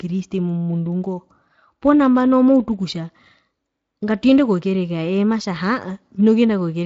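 Nothing in this speech stood out as a technical fault on listening.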